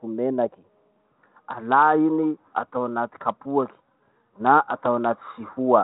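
No technical faults are audible.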